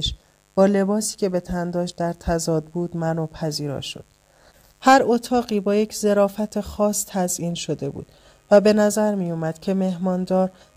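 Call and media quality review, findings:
Mains buzz, throughout. Steady raspy buzz roughly 40 dB below the signal. Probable component: dimmer, rectifier or unshielded cable injecting switching spikes twice per 50 Hz cycle. Spectrogram: unbroken horizontal comb at 50 Hz multiples, reaching several kHz. Waveform: narrow spikes every 10 ms in quiet passages.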